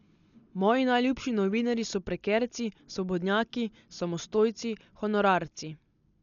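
Speech runs dull from start to finish, with nothing above 6.9 kHz and a rough, fluttering noise around tonal parts, heavy codec damage that is likely Dolby Digital compression at a rate fitting about 48 kbps. Starved frequency lines are filled with dither noise, giving a grainy flutter rather than a clean gap.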